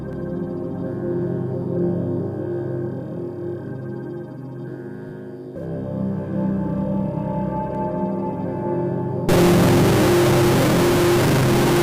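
From 9.29 s to the end, distortion appears, and quiet moments fill with noise. This is a stuck bit, likely one data bit held fixed.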